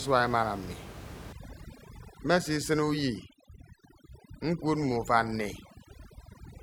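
From 1.33 s to the end, overdone noise removal takes hold. The gaps drop to near silence with twinkling specks, and quiet parts of the speech go with them.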